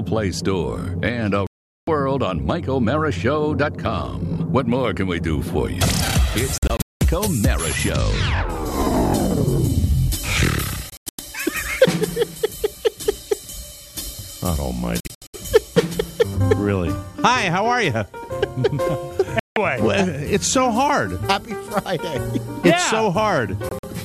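Digital broadcast dropouts cut the sound to silence at 1.47, 6.58, 10.90, 15.00, 19.39 and 23.69 s, as the receiver muted through failed frames. The first is a solid 0.41 s hole. Most later ones break into several short gaps. Unlike concealed packet loss, nothing is smeared or repeated, and the missing audio is simply gone.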